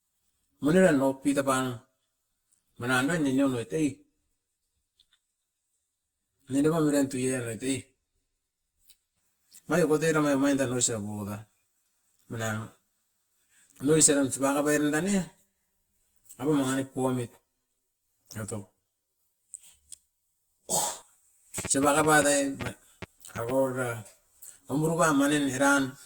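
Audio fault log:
throughout: channel delay (comb filtering). One channel arrives around 10 ms late and the two are summed to mono, so shared content cancels at evenly spaced frequencies from around 50 Hz upward, giving a hollow, phasey tone. A spectrogram shows fixed dark horizontal stripes at regular intervals.
21.58–23.5 s: train of clicks. About ten sharp pulses land at roughly 5.25 per second with uneven spacing, sitting around 10 dB above the signal as ticking. The likely cause is interference or a faulty connection. The waveform shows narrow spikes, and the spectrogram thin vertical lines.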